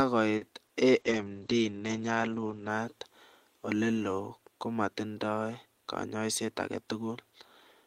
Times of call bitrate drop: 1.00-2.75

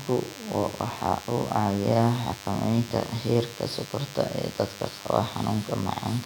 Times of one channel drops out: none

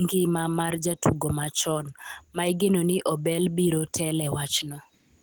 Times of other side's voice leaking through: none

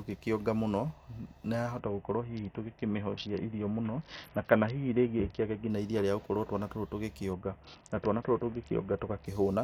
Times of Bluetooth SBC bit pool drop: 1.79-5.70, 7.33-9.26

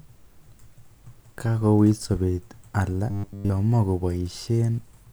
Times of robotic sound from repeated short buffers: 3.11-3.51

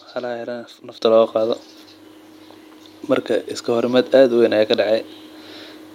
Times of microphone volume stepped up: 1.02

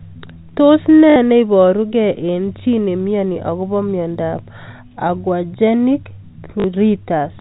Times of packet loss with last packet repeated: 1.10-1.16, 6.60-6.64

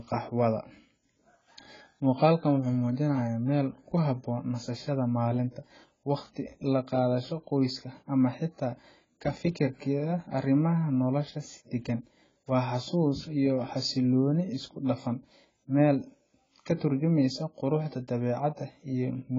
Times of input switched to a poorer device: none

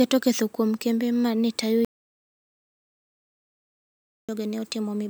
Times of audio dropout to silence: 1.85-4.29

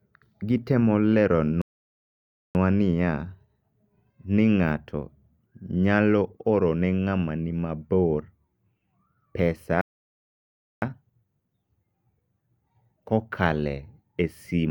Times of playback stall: 1.62-2.55, 9.81-10.82

